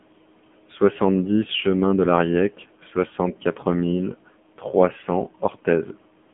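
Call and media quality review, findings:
AMR narrowband mobile codec, whole clip: band roughly 150 Hz to 3.4 kHz, dead above 3.6 kHz. Heavy buzzy, synthetic coding that fits a low AMR-NB mode around 6.7 kbps.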